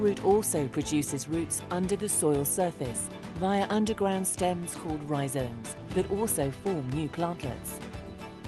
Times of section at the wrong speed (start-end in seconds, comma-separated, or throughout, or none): none